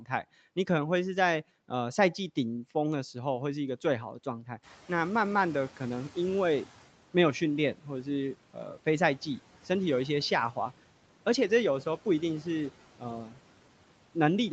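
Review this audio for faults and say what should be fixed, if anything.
Noise suppressor catching up, 4.62 to 6.74 s: the room noise jumps by about 16 dB around 4.5 s, and the suppressor's noise estimate trails it. The louder noise passes through at first, then sinks by about 9 dB over 2.12 s as the estimate adapts. A faster-tracking noise estimator, or quicker adaptation when the noise floor jumps, would shorten this window.

Speech cut by the noise suppressor, 13.26 to 13.37 s: for about a tenth of a second, the suppressor treats part of the speech as noise and pulls it down with the background, by up to about 8 dB. That stretch sounds swallowed and faint. Stronger speech-presence protection, or less aggressive suppression of quiet speech, would keep such passages intact.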